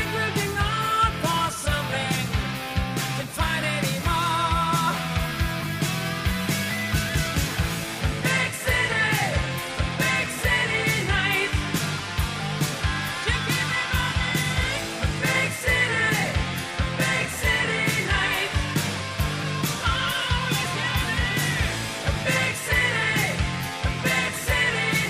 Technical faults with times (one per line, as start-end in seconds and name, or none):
none